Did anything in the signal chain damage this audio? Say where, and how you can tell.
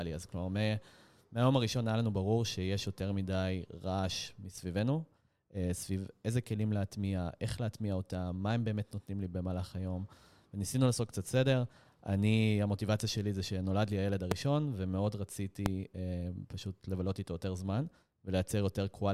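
Yes: a loud pop occurs twice, at 14.31 to 14.34 s and again at 15.66 to 15.68 s. Each is a single sharp pop roughly 20 dB above the speech, lasting about 20 ms, with the speech continuing underneath. The likely cause is a sudden voltage step or pulse entering the chain, from a plug, switch, static discharge or driver glitch, which the following circuitry shaped into a brief pulse layered over the signal.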